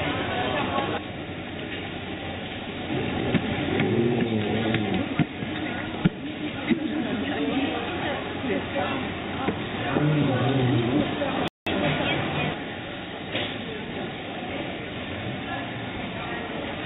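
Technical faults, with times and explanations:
2.78–2.80 s, skip ahead: the sound jumps forward with no gap, losing around 0.4 s, because queued later audio replaced a dropped stretch.
2.88–3.65 s, jitter buffer speed-up: the sound runs about 13% fast at unchanged pitch as short pitch-period pieces, roughly a tenth of a second in total, are cut out.
11.48–11.67 s, playback stall: the sound drops to silence for about 187 ms mid-flow, likely because the player ran out of data before recovering.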